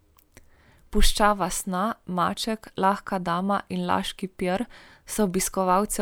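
No technical faults are audible.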